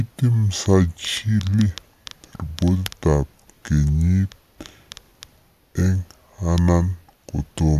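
From start to finish the speech plays at two thirds of its proper speed and about seven semitones low, the signature of a wrong sample rate. The samples are being read out more slowly than they were captured, with no conversion, which fits 48 kHz audio played at 32 kHz. Voices sound deep, sluggish and drawn out. On a spectrogram, harmonics and formants sit lower by the same 0.667 ratio, and every syllable is stretched wider in time.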